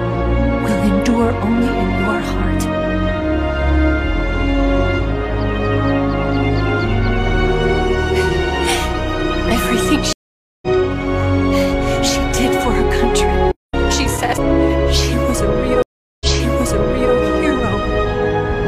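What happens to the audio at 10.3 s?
That's a stream reconnect: from 10.13 to 10.67 s the audio drops to about half a second of silence while the connection restarts, then resumes roughly 0.3 s further on.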